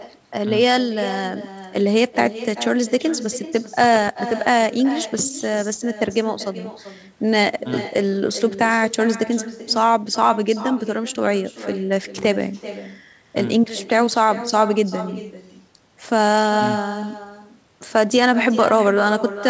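Speech recorded over a call, with every phrase followed by a fainter, thinner copy of itself. That trailing shadow sits about 14 dB below the speech and arrives around 0.4 s later, which is the echo with no canceller: the far end played the call on a loudspeaker, its microphone caught it again, and nothing stripped it out, so the talker's own sound returns after the network round trip. The echo runs through the whole clip. From 4.08 to 4.10 s a single sharp loud pop cuts across the audio, peaking a few dB above the speech while the talking carries on underneath. A brief voltage spike is the likely cause, such as a plug, switch, static discharge or driver glitch, with the following circuitry shaping it into that short click. The audio stops at 8 kHz throughout, which fits the wideband call codec and microphone processing on the line.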